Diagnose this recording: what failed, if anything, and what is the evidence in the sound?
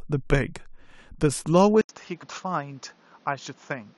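At the driver or device stage, the capture input was likely switched to a poorer device at 1.81 s. After an 80 ms gap the speech loses everything above 7 kHz, drops about 10 dB, and sits over new background noise roughly 30 dB down, through to the end.

At the codec stage, damaged data in the compressed stream produces a brief disturbance at 2.22 s. The decoder misread corrupted frames, lost sync, and resumed at the next valid frame header, leaving a short glitch in the speech.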